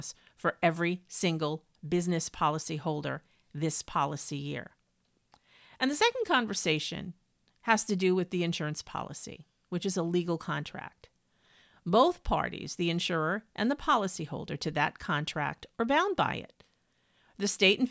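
No technical faults can be heard anywhere in the recording; the signal holds steady and intact throughout the speech.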